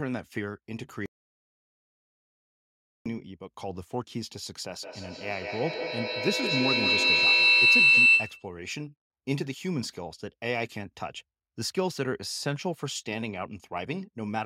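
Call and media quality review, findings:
Audio dropout to silence, 1.06–3.06 s. Speech cuts out abruptly and about 2.0 s are lost, with the gap silent and no room tone. Likely the input device or link dropped while the recorder kept writing silence. Lost content unrecoverable.

Feedback howl, 4.82–8.6 s. A tone near 3 kHz builds, with loop repeats roughly every 150 ms, and peaks about 11 dB above speech level. Two endpoints in one room share the call, so mic-to-speaker loop gain exceeds unity, and each pass grows and narrows toward the loop's favoured frequency until the loop breaks.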